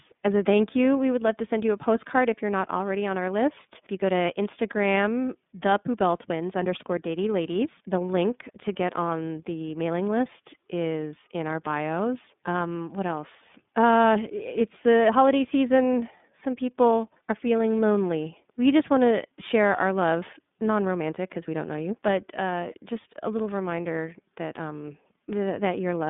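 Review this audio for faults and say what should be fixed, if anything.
iLBC codec, throughout the speech: the audio is confined to a telephone band of roughly 150 Hz to 3.6 kHz, with nothing at all above 3.8 kHz, so sibilants and consonant detail are dulled. The roughness is plainly audible, giving voiced sounds a buzzy, synthetic edge, because each 30 ms frame's excitation is coded on its own without drawing on the previous frame, which fits iLBC's 13.33 kbps mode. To prevent it, record or transmit over a wideband or lossless path rather than an iLBC-coded VoIP leg.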